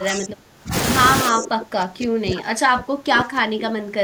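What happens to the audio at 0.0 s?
From the start to 0.74 s the speech is pushed down hard, by around 30 dB at its deepest, across most of that stretch. This is speech suppressed in double talk, likely from an echo canceller that heard both sides at once, could not separate this talker from loudspeaker echo, and attenuated everything. Unlike packet-loss dropouts, this comes from the canceller turning the level down during the overlap.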